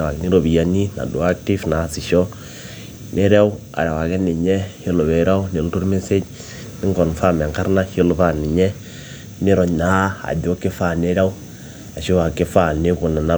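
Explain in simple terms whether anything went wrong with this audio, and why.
Nothing went wrong here; listening through the whole recording, there's no dropout, glitch, distortion or other technical hiccup anywhere in it.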